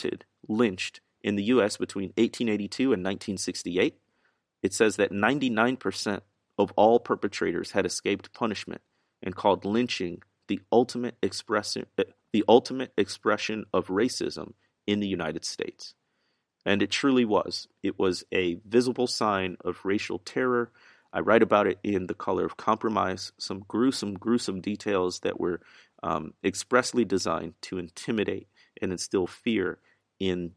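No technical faults are audible anywhere in this speech recording.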